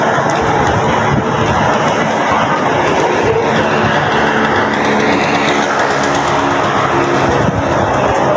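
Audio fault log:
throughout: gain pumping. The gain swings around 15 dB, likely from excessive input gain with a fast limiter pulling it down on loud sounds. The waveform looks flattened and even, and the spectrogram shows content up to 8 kHz.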